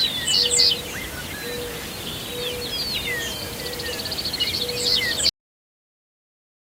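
At 5.29 s the audio has a cut-off end. The final buffers never reached the output, so the sound stops mid-event and falls straight to silence without any decay.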